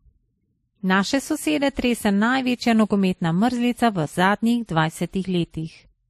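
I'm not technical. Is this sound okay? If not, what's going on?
No. Throughout the whole clip, from the first second to the end at about 6 seconds, the speech carries a layered quality of mixed flaws, and nothing is present above about 13.1 kHz, so the top end sounds dulled. The likely cause is transcoding between lossy codecs: the recording was squeezed by one data-saving format, then re-squeezed by another. The second pass reworks the first pass's flaws and adds its own, so both sets are heard together.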